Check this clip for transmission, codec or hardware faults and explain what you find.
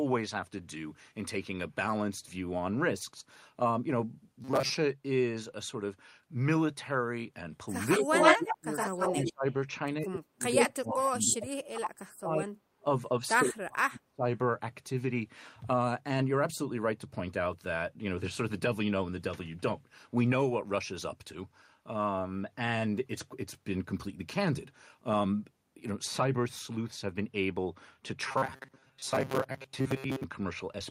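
Three kinds of fault are present. The speech turns robotic twice. An echo leak and speech suppressed in double talk overlap between about 7.9 and 14.2 s.

Robotic sound from repeated short buffers occurs at 4.44 to 4.77 s and again at 28.28 to 30.24 s. Audio likely arrived too seldom. The player filled the gaps by repeating the last short slice. About half of the first stretch is repeated, and most of the second. The repeats impose a rigid 133 Hz buzz, which fits slices of about 7.5 ms. The speech sounds metallic but still loosely follows its original shape.

An echo leak appears at 7.90 to 8.58 s, 8.77 to 9.32 s and 10.56 to 10.66 s. Each is a copy of the speech delayed by 112 ms. The likely cause is a loudspeaker on one side whose echo canceller let some sound return. In the first stretch the echo is about 10 dB louder than the speech. In the second it is about 5 dB quieter. The last is brief and about 5 dB louder.

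Speech suppressed in double talk occurs at 7.99 to 8.07 s, 8.36 to 8.75 s, 9.12 to 9.44 s, 10.00 to 12.68 s and 13.42 to 14.24 s. The echo canceller likely could not tell the talker from the returning echo, so it turned both down. The first dip is about 10 dB and the second about 25 dB. The later ones drop the speech by up to about 35 dB. The longest stretch loses about two seconds in total.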